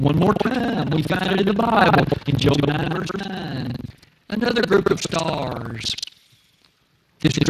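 Buffer tearing runs through the whole clip. The writing side and the reading side of the ring buffer have slipped, so each period joins on both sides to roughly a third of audio from about 150 ms earlier. The result is a rattling buzz at 21.5 Hz, which fits a 2048-sample buffer.

Speex codec damage is also present from start to end and is plainly audible. Too few bits go to the excitation at a bitrate that points to around 22 kbps, so the speech sounds hoarse and noisy. Nothing remains above 15.2 kHz.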